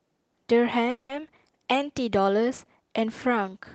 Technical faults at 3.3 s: none

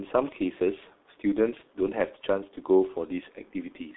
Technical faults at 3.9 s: G.723.1 codec

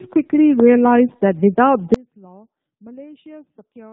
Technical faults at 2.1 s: tandem speech coding; audio dropout to a faint residue

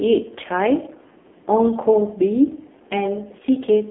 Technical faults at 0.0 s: AMR narrowband mobile codec

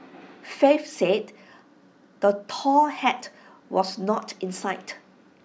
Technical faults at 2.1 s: none

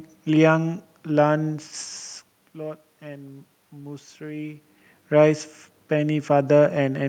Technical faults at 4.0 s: none

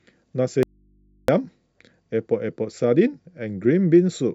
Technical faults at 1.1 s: audio dropout to a faint residue

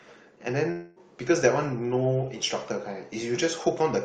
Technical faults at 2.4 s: none

